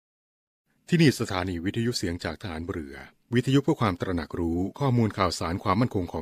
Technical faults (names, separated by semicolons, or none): none